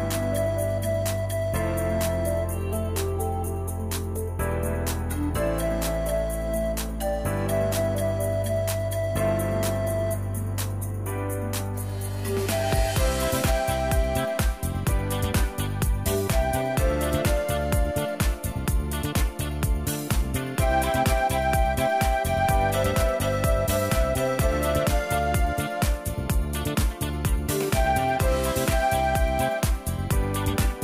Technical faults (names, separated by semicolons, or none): none